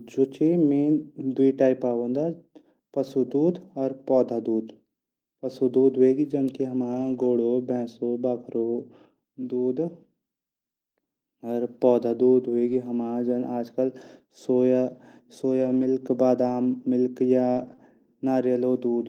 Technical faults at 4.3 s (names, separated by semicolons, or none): none